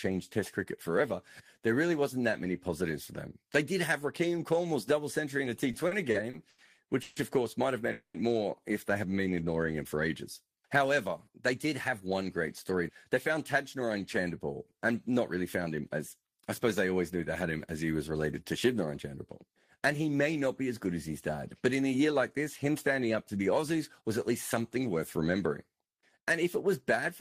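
From 5.71 to 6.60 s, just after "double century in a", there are repeated stalls (stutter). Packets were reaching the receiver more slowly than they were being played, so its jitter buffer ran dry five times. Each time the last sound was stretched to fill the wait, 210 ms in all, with the longest gap 90 ms. About a quarter of that stretch is filled-in sound. Nothing is lost, but the speech drags and catches in short jerks.

Two call audio freezes follow, at 7.02 to 7.18 s and 7.92 to 8.16 s. The first ends just before "of course might have". The likely cause is packets held up in transit, leaving the buffer empty while the receiver carried the last sound forward. In the first, 140 ms of continued sound is inserted. In the second, 220 ms is inserted and fades to silence for about the last 100 ms. The speech then resumes where it stopped, later than before.

A jitter buffer speed-up runs from 10.90 to 12.29 s, just after "ignoring him for ages", and again from 12.69 to 13.90 s. 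The buffer had built up excess delay, so the receiver trimmed many tiny pitch-period slices to catch up. Each passage plays about 7% fast and loses roughly a tenth of a second. The pitch stays the same, but the delivery sounds hurried. A milder instance at 24.01 to 24.97 s runs about 6% fast and removes a little less.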